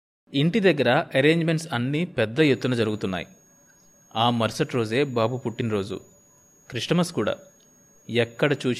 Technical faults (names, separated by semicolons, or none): switching supply whistle